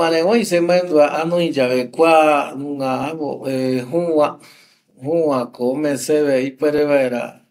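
From 1.16 to 6.78 s, about four clicks recur every 1.88 s, likely clock drift buffer slips dropping or repeating a few dozen samples. Their steady spacing distinguishes them from random dropouts.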